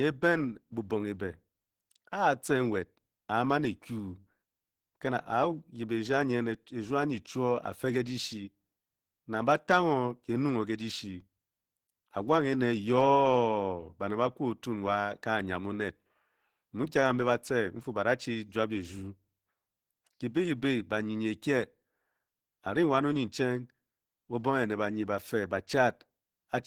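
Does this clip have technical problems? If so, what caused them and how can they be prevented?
Yes. Opus compression damage runs throughout. The speech sounds muffled and hoarse, which fits a likely low-rate hybrid encoding near 16 kbps. Prevent it by encoding at a higher bitrate.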